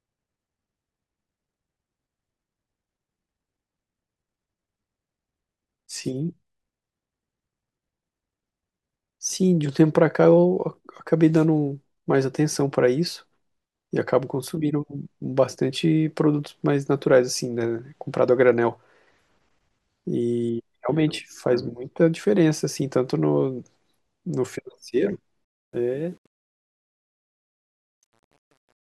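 Truncation distortion on the fade, 25.45 to 28.9 s: the fade keeps roughly 9 bits without dither, so the tail sounds gritty, worst from 26.09 s.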